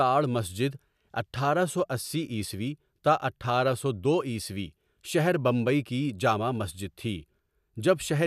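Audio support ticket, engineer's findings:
No audible faults found in this speech recording.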